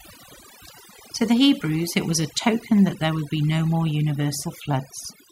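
From start to finish the speech carries overdone noise removal: a noise reducer applied far too aggressively, cutting individual frequency bands toward silence whenever their level sits close to its noise estimate. The background collapses into near silence dotted with twinkling, glassy specks, and softer components of the voice vanish with it. Unlike a noise gate, which shuts everything at once, the damage here is scattered band by band.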